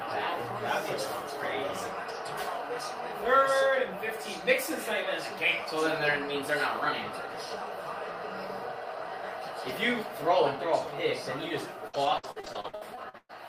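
Repeated packet loss (robotic sound) from 11.87 to 13.31 s: a dozen short dropouts, up to 115 ms each, were patched by stretching earlier audio, giving choppy sound.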